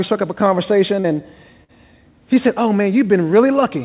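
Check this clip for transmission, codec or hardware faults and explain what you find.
Two transmission faults can be heard in this speech clip, both dropouts covered over by the receiver. The audio is band-limited with nothing above 4 kHz, which points to a narrowband telephone codec such as G.711.

From 1.00 to 1.07 s there is a brief smear, a wobble where the sound is stretched rather than cut. This is short concealed packet loss. About 40 ms of audio never arrived in time, and the receiver extrapolated the preceding sound for roughly 39 ms, following its pitch or shaping noise, before blending back into the real signal. Any short consonant falling in that hole would be lost.

From 1.64 to 1.72 s the sound briefly holds and fades, becoming a sustained buzz or dying hiss before the speech picks up again slightly further on. This is a burst of packet loss. Around 40 ms of audio went missing in a run, and the receiver filled about 46 ms by continuing the last sound while turning it down. 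The material that should have been in that stretch is gone, so the speech jumps forward when it resumes.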